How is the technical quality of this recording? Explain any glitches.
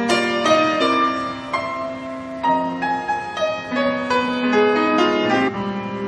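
Three brief glitches break up the recording: short blips at 0.80 to 0.82 s, at 3.08 s, and at 5.47 to 5.49 s, each lasting around 16 to 22 ms. They come from damaged data in a compressed stream. Some of the encoded bytes were lost or corrupted, so the decoder misread those frames, lost its place, and had to hunt for the next valid frame header. That brief confusion is what breaks up the sound.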